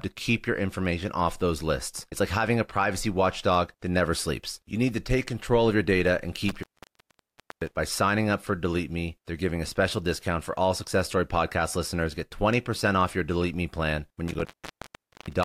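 At 6.49 s, just after "of your data and", the speech drops out from an intermittent contact: a loose plug or cable connection briefly opens, so the signal path breaks, with crackle at the break and the reconnection and faint hiss while it is open, for about 0.99 s. Signal returns at 7.76 s before "signing up for". The same fault recurs at 14.28 s after "plan when", opening for about 0.82 s and running to the end of the clip.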